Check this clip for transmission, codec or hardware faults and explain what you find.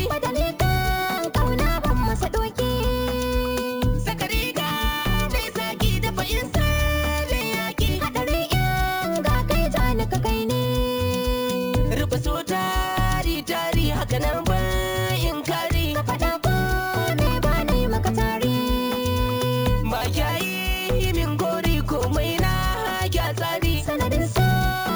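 There is one fault, present throughout: imaging from sample-and-hold upsampling. The audio was raised from 16 kHz to 44.1 kHz by repeating samples without a smoothing filter, so a mirrored copy of the spectrum, about 19 dB below the signal, fills 8 to 16 kHz. It sounds like a bright metallic fizz that follows the level of the sound. On a spectrogram the band is an upside-down reflection of the content below 8 kHz. In the waveform, close zoom shows small staircase steps.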